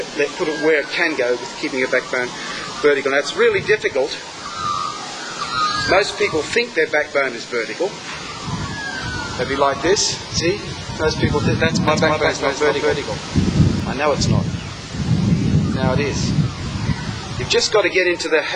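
Between 11.88 and 13.80 s, a doubled audio track, likely from a slower second capture path, adds an equally loud copy about 200 ms late, repeating every spectrogram shape with abrupt edges.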